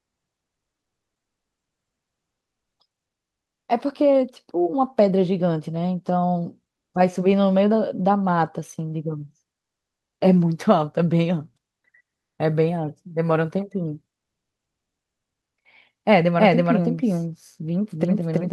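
From 16.39 s to the end, a doubled audio track appears, likely because a slower second path captured the speech again. A full-band copy trails the original by about a third of a second at roughly equal level, starting abruptly, with no decay or room colour.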